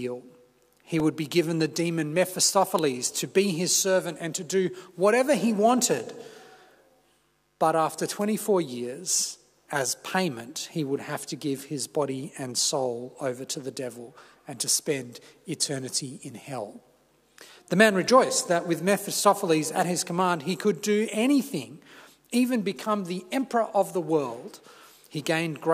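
At 1.00 s, a repeated buffer is heard as a brief click. New audio arrived late, so the last 2.9 ms piece played twice. That length fits a 128-sample buffer. At 18.08 s, the same piece sounds three times, giving a short buzz.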